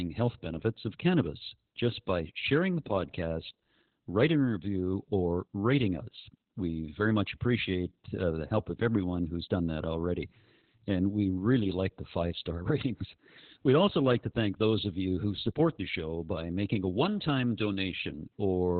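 The speech sounds muffled, hoarse and slightly robotic from start to finish, with nothing above about 4.3 kHz. This is Opus voice compression running its SILK speech coder in narrowband, which fits a bitrate around 8 kbps coarsely coding the excitation.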